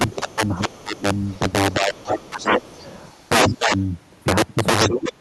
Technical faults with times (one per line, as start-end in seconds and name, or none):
0.00-5.20 integer overflow
0.08-1.52 other side's voice leaking through
0.16-1.05 speech suppressed in double talk
1.75-2.72 speech suppressed in double talk
1.94-3.57 other side's voice leaking through
3.58-3.76 speech suppressed in double talk
4.82-5.00 other side's voice leaking through
4.86-5.20 speech suppressed in double talk